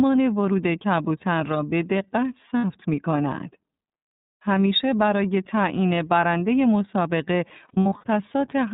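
The whole clip runs through the iLBC codec, and the damage is plainly audible. It's band-limited to telephone width with nothing above 4 kHz, and the speech has a slightly rough, synthetic edge. The coding sounds like the 30 ms, 13.33 kbps mode.

At 2.58 s there are lost iLBC frames, about 60 ms missing, which fits two frames. The decoder fills the gap by repeating the last pitch cycle with some noise mixed in, so you get a brief held, buzzy vowel. The speech recovers straight away because each frame is decoded on its own.

From 7.68 to 8.04 s more lost iLBC frames turn up, about 210 ms in total scattered across that span. The longest single gap is a bit under a tenth of a second. It comes across as a stretch of stuttery, breathy sustained vowel sounds broken up by snatches of real speech.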